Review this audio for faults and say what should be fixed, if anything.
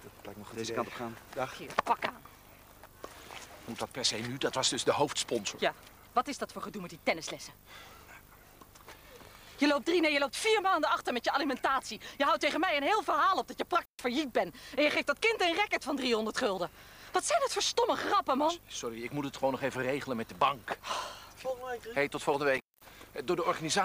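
Intermittent contact at 13.82 s and 22.56 s: a loose connection opens for 135 ms, then 207 ms, crackling at the edges, unlike a clean digital dropout. Reseat or replace the suspect cable and plugs, and secure them so they cannot move during recording.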